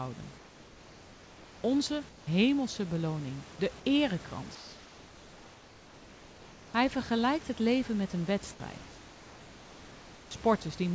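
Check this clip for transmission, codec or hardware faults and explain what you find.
The background in the pauses is replaced by comfort noise, four times: 0.38 to 1.64 s, 2.09 to 2.27 s, 4.55 to 6.74 s (ending before "vergelijkt het leven met") and 8.78 to 10.31 s (after "het leven met een"). The likely cause is discontinuous transmission: the sender stops sending during silence, and the receiver fills the gap with synthetic noise. The room's real background, with its detail, turns into a flat, featureless hiss about 3 dB quieter until the speech returns.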